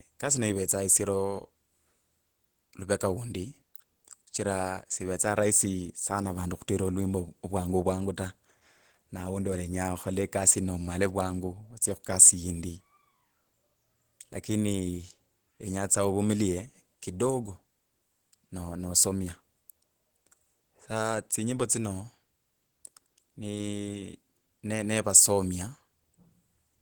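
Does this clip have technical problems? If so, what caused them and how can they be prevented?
Yes. Opus voice compression in hybrid mode, at a rate that points to about 16 kbps, codes the speech coarsely throughout, leaving plainly audible coding damage despite content reaching about 20.1 kHz. Encoding at a higher bitrate would prevent it.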